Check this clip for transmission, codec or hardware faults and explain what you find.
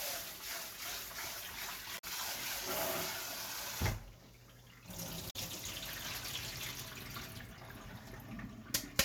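Two brief faults are audible, both damaged data in a compressed stream. They occur from 1.97 to 2.04 s and from 5.29 to 5.36 s. Corrupted bytes made the decoder misread frames and resynchronise. Each event is a short disruption lasting about 70 ms.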